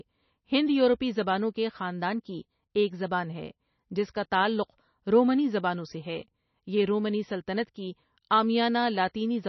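Throughout, the speech sounds watery and swirly with nothing above 5.9 kHz, likely heavy MP3 compression at a low bitrate, around 28 kbps, cutting treble and dropping weak components.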